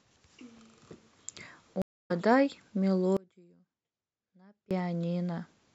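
At 1.82 s the speech stops in a stream reconnect: the connection dropped, leaving about 0.27 s of silence until 2.11 s, and a fresh decoder picked up the stream roughly 150 ms further on, so a short stretch of speech is skipped over.

From 3.17 s to 4.71 s there is an audio dropout to a faint residue. The speech cuts off abruptly for 1.54 s, leaving only faint sound around 30 dB down, likely because the signal feed failed while the downstream path stayed live.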